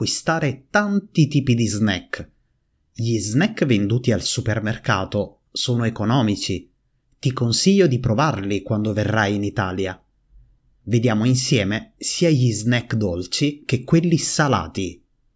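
No technical fault can be heard anywhere in the recording.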